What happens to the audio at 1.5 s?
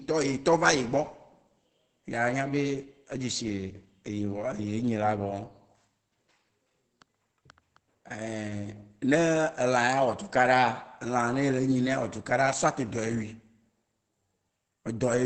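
Opus compression affects 1.5 s as it does the whole speech clip. The speech sounds muffled and hoarse, with nothing above 8.4 kHz, which points to the codec's speech mode at a rate near 16 kbps. Those limits are the likely cause.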